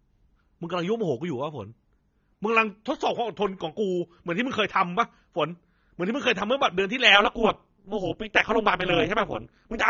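From the start the speech sounds dull and smeared, with a warbling, fizzy edge on sibilants. This is plainly audible AAC compression, likely AAC-LC at a low bitrate near 24 kbps, where high frequencies are cut and thin bands are left gappy or filled with substitute noise.

From 7.15 s to the end, a metallic buzz with extra tones around the voice takes over. This is overlap-add ripple. The frames were rejoined with an overlap that doesn't sum evenly, so the level swings by about 60 dB, roughly 200 times a second.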